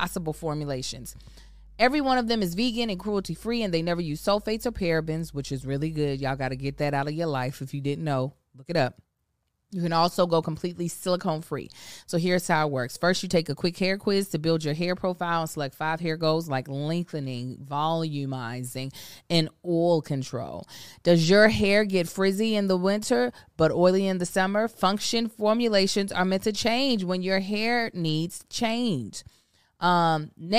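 From the start to 6.84 s, mains hum sits under the speech. It is a steady low tone at 50 Hz, roughly 25 dB below the speech. A ground loop or nearby transformer let the power line leak into the signal. Then the hum stops.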